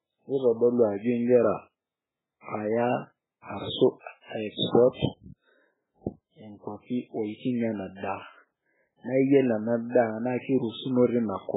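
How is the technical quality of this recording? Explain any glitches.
Technical quality is poor: the speech carries heavy compression damage from start to finish. Throughout the clip, nothing is audible above about 3.8 kHz, and the remaining sound is watery and swirly, with s sounds turning into metallic chirps and consonant attacks smeared. The likely cause is MP3 compression at a very starved bitrate, consistent with something around 8 kbps. Short of bits, the encoder cuts the treble at a fixed point and zeroes weak frequency lines that flicker on and off between frames. A simple low-pass filter or telephone band limit would remove the same treble but leave what remains steady, without that warbling.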